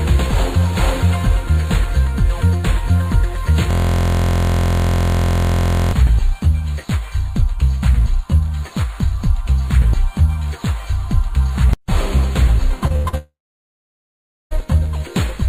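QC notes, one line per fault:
3.71–5.93 s, system hang loop: a 23.22 ms block, which fits a 1024-sample buffer, repeats exactly 96 times. The result is a steady buzz at 43.1 Hz. On a spectrogram it appears as a harmonic comb spaced 43 Hz apart. The waveform shows identical blocks tiling the span.
12.87 s and 13.08 s, short concealed packet loss: brief smears where 20 ms and then 40 ms of audio went missing. Each gap was filled for 27 and 45 ms by continuing the preceding sound, then blended back. On a spectrogram each appears as a short, smoothed stretch without fresh detail.
12.96–13.06 s, burst of packet loss: 80 ms of audio is gone, bridged by 82 ms of continued sound that fades as the gap runs on before playback resumes further on. On a spectrogram this shows as a smeared, decaying band with a clean restart.
13.17–14.53 s, long network dropout: about 1.3 s is filled and 1340 ms of audio is missing, likely because nothing arrived over the network. 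A short fading continuation gives way to 1180 ms of silence. Both waveform and spectrogram go flat and empty until the sound returns.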